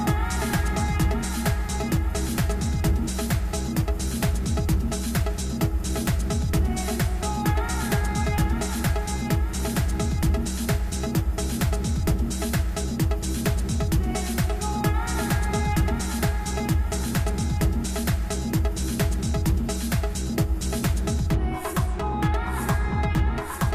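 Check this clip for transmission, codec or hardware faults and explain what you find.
No faults can be heard.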